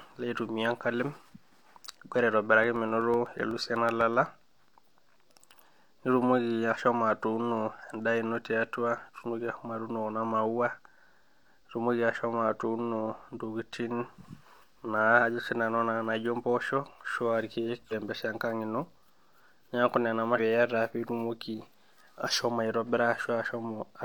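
From 2.64 to 4.89 s the speech carries a row of regular ticks, one every 0.125 s, about twenty in all. These are periodic USB or driver dropouts: something stalls the audio path on a fixed schedule, and each time roughly a millisecond of signal is replaced by silence. At 17.88 s, and again at 20.34 s just after "neeku nena", a brief glitch cuts in, each lasting about 60 ms. This is damaged data in a compressed stream, where corrupted frames throw the decoder off until it finds its footing at the next valid frame header.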